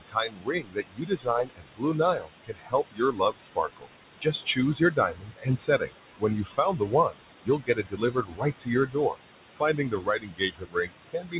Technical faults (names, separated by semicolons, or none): noise suppressor artifacts; speech cut by the noise suppressor